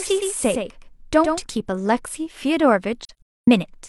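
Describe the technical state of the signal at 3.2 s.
AAC frame loss with muting, 3.05 to 3.48 s: lost frames were zeroed, so speech fades into soft-edged gaps, the longest roughly 0.3 s.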